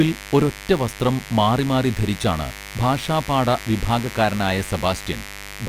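From start to finish the speech sits over a mains buzz, a steady raspy drone built on 50 Hz. Sharp switching spikes, twice per mains cycle, get into the signal path and spread harmonics up into the kilohertz range, sitting roughly 15 dB under the speech.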